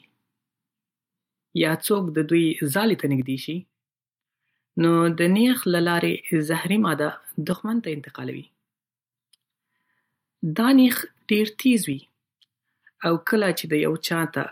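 One channel drops out three times in this speech clip, at 3.22–4.25 s, 7.53–9.13 s, and 11.93–12.46 s just after "دا نېښ ډېر تېز", with the level falling abruptly by about 6 dB, likely because one stereo channel went silent and halved the mono sum.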